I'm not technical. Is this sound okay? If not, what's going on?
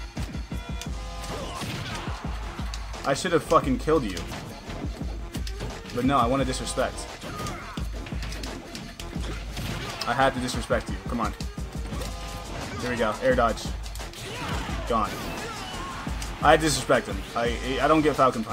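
No, there is a problem. Running through the whole clip, behind the main sound, is a steady chirping, warbling tone that flips back and forth between two pitches, roughly 1 kHz and 2 kHz. It sits well below the main sound but never stops. This is timecode bleed: a timing signal used to keep recording equipment in sync, running at 30 frames per second, has leaked in from a neighbouring cable or track and been recorded along with the audio.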